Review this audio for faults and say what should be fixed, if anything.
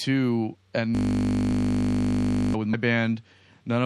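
Throughout the speech the high end is dulled and sibilants sound watery and swirly, with smeared consonant attacks. This is likely MP3 compression, and the plainly audible damage fits a low bitrate of around 64 kbps, where the encoder runs short of bits, cuts the treble and lets weak frequency lines flicker on and off between frames. Unlike skipped frames, this colouring is constant rather than a momentary event. Encode at a higher bitrate or use a lossless format.

From 0.95 to 2.54 s the sound freezes into a steady buzz. A system hang loop is repeating a single 20 ms slice of audio 81 times, a 50 Hz repetition rate, because the computer or driver stalled while the sound hardware kept replaying its ring buffer. A buffer that short produces a pitched drone rather than a machine-gun stutter, and exact repetition separates it from a dropout or silence. Fix the driver or process stall, or give the audio thread higher priority so the buffer is always refilled.

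At 2.73 s the speech jumps forward by roughly a tenth of a second, which fits about five 24 ms frames being dropped. These compressed frames were skipped because they were missing or the decoder rejected them as damaged. The overlapping neighbour frames blend across the gap, so the join is a brief smeared blip rather than the hard click of a sample-level edit, and no content repeats as it would in a loop. Verify file integrity and add error protection on transfer.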